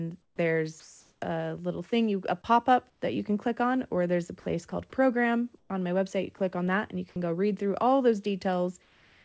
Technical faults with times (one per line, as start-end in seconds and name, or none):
0.22-0.38 comfort noise in place of the background
0.80-1.22 sound dropped by the voice detector
2.90-3.02 comfort noise in place of the background
4.40-4.72 sound dropped by the voice detector
5.58-5.70 comfort noise in place of the background
6.38-6.40 sound dropped by the voice detector
8.82-9.25 comfort noise in place of the background